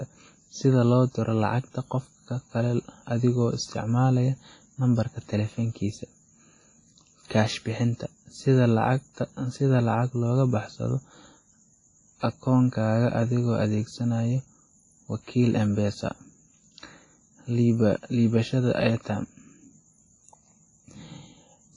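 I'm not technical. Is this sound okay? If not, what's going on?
No, not quite. The speech has a washy, ringing quality all the way through, with a hiss that swells and fades along with the talking, and the crisp top end is missing, with nothing above about 10.5 kHz. That's the signature of heavy audio compression, most likely WMA compression. The file was squeezed hard to save space, so fine detail got thrown away and the leftover errors smear across the sound instead of staying hidden.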